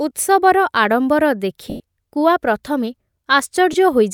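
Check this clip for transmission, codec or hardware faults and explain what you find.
The clip has lost LE Audio frames in two places, from 1.70 to 1.80 s and at 3.73 s. The decoder fills each 100 ms and 10 ms gap with the last spectrum, randomly sign-flipped and fading over the longer gap, so the speech briefly blurs into a noisy smear.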